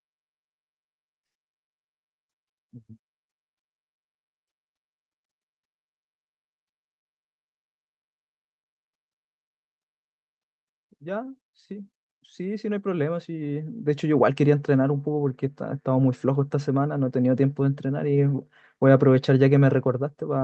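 At 10.98 s the level starts climbing, and by 14.39 s it's up by about 13 dB. That's automatic gain rising: the gain control decided the input was too quiet and pushed its gain up gradually over those three-odd seconds. The speech and the background noise swell together, so the room seems to creep closer along with the talker. The call path underneath is audible too, with the top end stopping around 8 kHz, which fits an Opus call link.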